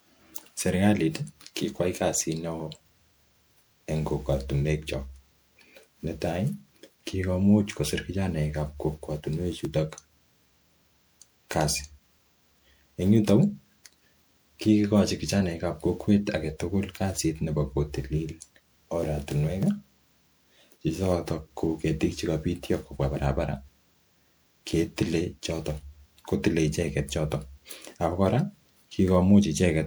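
Speech runs through the whole clip with a swirly, smeared and hollow quality and softened attacks, likely generation loss from around seven successive MP3 encodes at 128 kbit/s. A single 128 kbit/s pass would not sound this degraded, and that excess is what sets it apart. At 9.65 s and 19.63 s there are short skips where roughly 20 ms of sound vanishes and the two sides butt together with no silence, likely audio missing between chunks. Their regular 10 s spacing distinguishes them from random dropouts, which would leave a silent gap.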